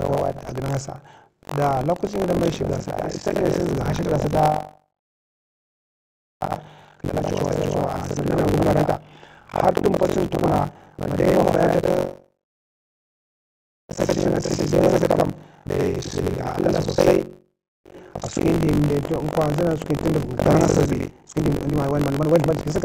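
Right from the start and all the way through, there's buffer tearing: the writer and the hardware reader have slipped, so roughly half of each period replays audio from about a tenth of a second earlier. You get a rattly robotic buzz near 46.9 Hz under the speech, which fits a 1024-sample buffer.

Then from 6.54 to 11.22 s, and again from 14.02 to 18.38 s, there's a jitter buffer speed-up. The receiver trims short pitch-period chunks to shrink its backlog, about 0.7 s each time, so the speech runs roughly 14% and then 16% fast at unchanged pitch and sounds hurried.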